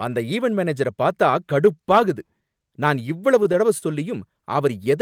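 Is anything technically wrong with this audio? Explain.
Yes. From 3.78 to 3.85 s, just after "நான் இவ்வளவு தடவ", there is a short stall from a late packet. The jitter buffer ran dry, so the receiver stretched the last sound by about 37 ms before resuming where it stopped, with nothing lost. It sounds like a briefly held sound, with a slight buzz or dip. On a spectrogram, the harmonics run flat and repeat across that span, and the waveform shows a short stretch of repeating cycles.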